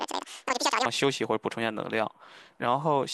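From the start to about 0.85 s, the speech plays as audio read two samples at a time (double speed): the reader treats each pair of samples as one frame, as if the data had two channels or wider samples. It runs twice as fast and a full octave (12 semitones) higher. A pitch shifter would keep the timing, but here pitch and tempo jump together by exactly 2x.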